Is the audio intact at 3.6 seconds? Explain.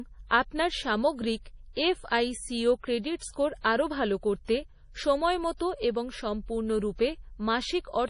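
No, not quite. From 3.61 to 3.64 s there's pre-echo, a short hiss smeared about 36 ms ahead of the attack that starts "আরও ভাল". The codec spreads its quantisation noise across a whole transform block, so when a sharp onset sits late in that block, noise sized for the loud part leaks into the quiet gap just before it. You hear a brief rush of hiss, and the attack itself comes across soft and blurred.

That moment also carries the heavy MP3 compression damage running through the whole speech clip. There's nothing above about 10.6 kHz, which fits a low bitrate around 32 kbps, and that is the likely cause of the damage. Short of bits, the encoder chops off the treble and drops weak frequency lines that flicker on and off between frames. That gives the speech a watery, swirly texture, with chirpy s sounds and smeared attacks.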